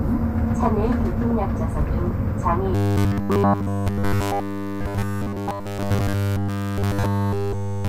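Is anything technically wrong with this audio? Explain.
Yes. From 2.75 s to the end, there is robotic sound from repeated short buffers. A fixed 100 Hz metallic buzz is imposed on the audio, which follows the original only roughly, likely from a 10 ms chunk looping constantly.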